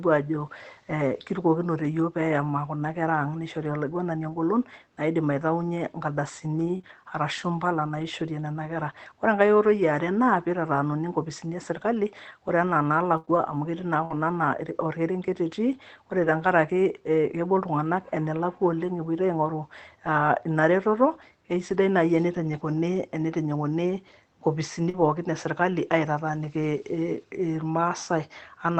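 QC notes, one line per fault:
0.39 s: lost packet rebuilt from error correction. One 20 ms packet was lost. The next packet's low-bitrate copy replaced it, so the moment before "eeh kirukokinote" sounds briefly rough and noisy.
6.77–6.85 s: short concealed packet loss. Two 20 ms packets in a row never arrived. The decoder extended the preceding sound to fill each one, which leaves a brief smear or wobble.
6.85–6.91 s: lost packet rebuilt from error correction. Two more packets, 40 ms in total, were replayed from their backup copies. The sound stays continuous but turns grainier and noisier.
13.17–16.29 s: scattered short gaps. After "e serikali ore anaa", about three separate holes appear, the longest around 70 ms. Each was patched by continuing the sound, giving small ticks and hiccups.
21.69–21.75 s: lost packet rebuilt from error correction. Two packets, 40 ms, were rebuilt from their backup copies. 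This stretch sounds briefly coarser and noisier, with no audible gap.
24.89–24.95 s: short concealed packet loss. About 40 ms never reached the decoder, which stretched the preceding sound across the hole. It comes through as a short smear.
24.93–25.03 s: lost packet rebuilt from error correction. Three packets, 60 ms, were played from low-bitrate copies just before "e serikali". The sound is rough and noisy there.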